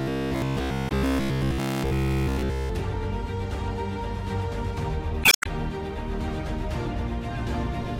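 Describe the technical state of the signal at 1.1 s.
Robotic sound from repeated short buffers, 0.02 to 2.7 s: a rigid metallic buzz near 66.7 Hz, likely from a roughly 15 ms slice repeating throughout.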